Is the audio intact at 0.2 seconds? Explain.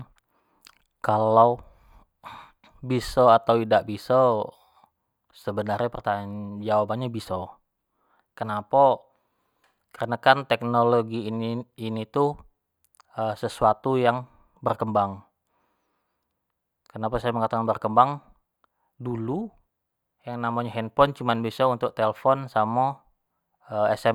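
Yes, at 0.2 seconds the speech plays through intact, with no audible dropout, click, distortion or other fault at that moment.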